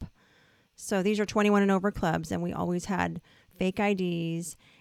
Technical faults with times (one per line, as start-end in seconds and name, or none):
2.92 corrupt frame decoded